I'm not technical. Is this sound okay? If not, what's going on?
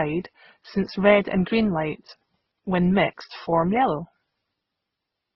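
No. Throughout, the speech sounds muffled and watery, with no sound above 5.7 kHz. This is likely transcoding between lossy codecs, where repeated compression stacks up damage.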